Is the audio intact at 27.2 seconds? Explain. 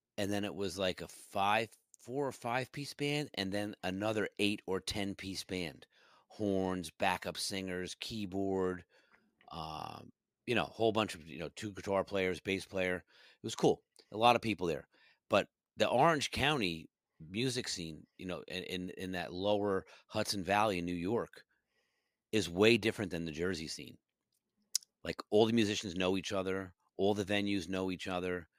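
Yes, at 27.2 seconds the speech is intact, with no dropout, glitch or other fault.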